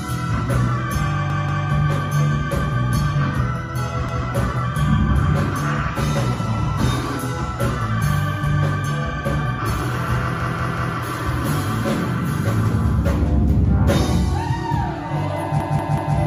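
Repeated buffer faults occur at 1.3, 4.09, 10.4 and 15.6 s. Audio arrived late, so the device replayed its last block of about 186 ms, which fits an 8192-sample buffer. It did this two, one, three and three extra times, heard as stutters. The waveform and spectrogram show identical copied blocks with hard joins.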